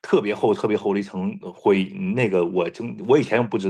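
No technical faults can be heard anywhere in the speech. There is nothing at any moment of the recording that needs a time or a description.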